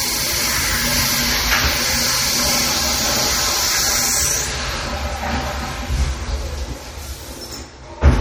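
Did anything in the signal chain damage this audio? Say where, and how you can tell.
Yes, at the codec stage, where this is likely MP3 compression at a low bitrate, with damage heard throughout the sound. Too few bits forced the encoder to drop weak frequency lines, which flicker in and out from one frame to the next. The result is a watery, swirling texture, with metallic chirps on bright noisy components and smeared attacks. The damage is plainly audible and points to a bitrate of about 48 kbps, with nothing above 20.6 kHz.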